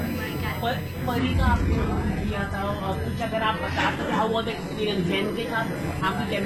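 From the first moment a USB whine sits under the sound: a fixed-pitch tone on 1 kHz and its multiples, strongest at 13 kHz and about 20 dB below the programme. It comes from the bus's 1 ms frame rate leaking into power or ground. Its steady, unchanging pitch distinguishes it from a swept or wandering interference.

At 1.19 s the adaptive stream drops to a lower bitrate and stays there to the end. The treble is abruptly cut, with nothing above 12.4 kHz, and the top end turns synthetic, which fits a switch to a low-rate HE-AAC version. Unlike a dropout, there is no gap.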